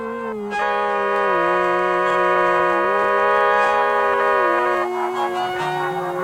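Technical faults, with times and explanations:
1.16 s and 4.77 s, dropped samples: The stream most likely skipped a handful of samples at each point, a tiny fraction of a millisecond, so the music's waveform leaps straight from one value to a later one. That loss is far too brief to take away any audible sound, but the sudden step in the waveform is heard as a single sharp click each time. In the spectrum, each click appears as a thin vertical line.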